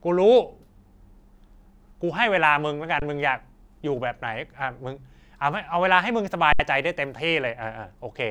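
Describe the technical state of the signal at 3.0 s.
An underrun with held sample runs from 2.99 to 3.02 s. The output buffer emptied, so the waveform freezes flat for about 23 ms, consistent with a 1024-sample block. Speech then resumes where it stopped, with only a soft edge.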